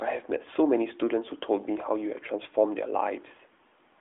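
Nothing goes wrong in this speech; it simply carries the narrow phone-line band of an AMR narrowband mobile codec working as intended, spanning about 300 Hz to 3.5 kHz, with the light coding texture that fits its 12.2 kbps mode.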